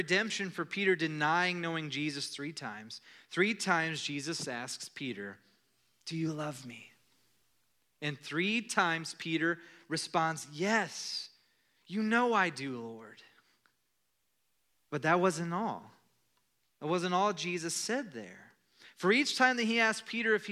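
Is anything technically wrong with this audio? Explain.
No, nothing technically wrong can be heard anywhere in this speech recording.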